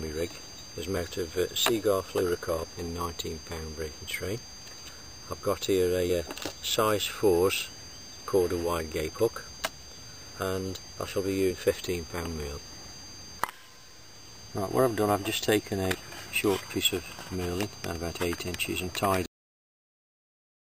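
At 2.63 s and again at 15.93 s, compressed frames are skipped: the audio jumps ahead by roughly 200 ms, then roughly 300 ms, which fits runs of 23.2 ms frames lost or rejected. A cut-off end follows at 19.26 s, where the final buffers were never played and the sound drops abruptly into digital silence without decay.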